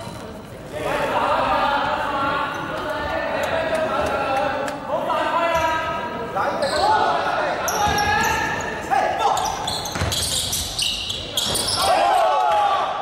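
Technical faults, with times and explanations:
Nothing technical stands out here; it all comes across as it should, with no glitches to point to anywhere along the way.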